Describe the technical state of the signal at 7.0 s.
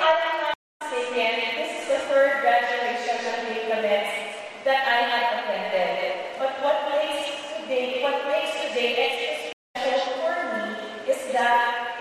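At 7.0 s the signal is intact, with no dropout, distortion, glitch or other fault audible at that point.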